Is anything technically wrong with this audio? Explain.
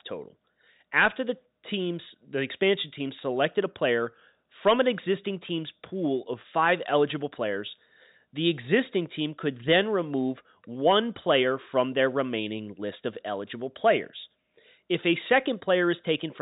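No, nothing in this speech recording points to a technical fault. It has the sound of G.711 telephone coding, with nothing above about 3.8 kHz and at most a faint grain that follows the level of the voice, as that mu-law format does.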